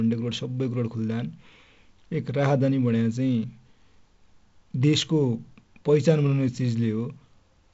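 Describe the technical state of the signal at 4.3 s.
At 4.3 s the speech comes through intact, carried by G.722 wideband telephone coding at 48 kbit/s, with its light coding hiss and nothing above about 7.7 kHz.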